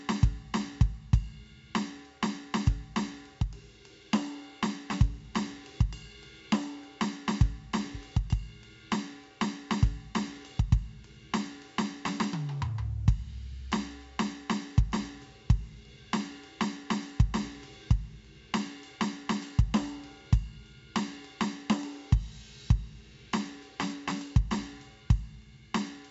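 4-bit ADPCM compression runs through the whole piece of music. Each sample is coded as a coarse step from a predicted value, so heavy gritty hiss rides on every loud passage. Sharp attacks distort. Nothing reaches above 7.7 kHz, which fits a rate near 64 kbps.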